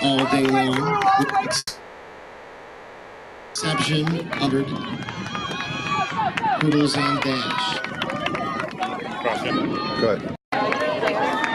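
From 1.57 to 3.57 s the sound stalls: the last moment is stretched into a fading buzz or hiss, ending in about 30 ms of silence, before playback resumes where it left off. This call audio freeze is likely from held-up packets draining the jitter buffer, adding about 2 s of fill with nothing lost.

From 3.97 to 4.57 s the audio hurries slightly without a pitch change. This is a jitter buffer speed-up running at 107%, trimming pitch-period-sized pieces, roughly 50 ms in total, to cut the built-up delay.

Inside that stretch, at 4.46 to 4.49 s, the sound jumps forward almost seamlessly. This skip ahead drops roughly a second of audio and joins the two sides with only a 10 ms bridge.

The rushed, compressed feel returns from 6.44 to 6.85 s and from 10.05 to 10.51 s. These are stronger speed-ups at 125% and 126%, removing roughly 100 ms and 150 ms respectively.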